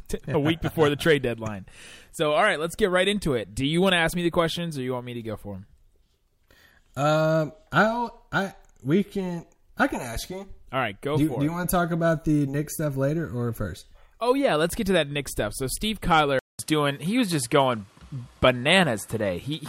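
At 16.39 s the speech drops out for about 200 ms, and when it returns the top end is gone: nothing reaches above 13 kHz, so the sound is duller and boxier until the end. The level shifts by around 5 dB, and a new background noise sits roughly 40 dB below the speech. This is likely an input switched to a poorer device mid-recording, a different microphone or headset path with a narrower band and its own noise.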